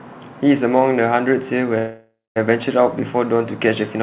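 At 1.78 s the speech stops moving forward and a call audio freeze sets in, lasting until 2.38 s. The final sound is stretched into a fading buzz that sinks to silence for about the last 0.18 s, most likely because delayed packets let the jitter buffer run dry. Unlike a packet-loss dropout, nothing is skipped: the speech resumes exactly where it halted, now running about 0.58 s later, still capped near 4 kHz as a G.711 link would leave it.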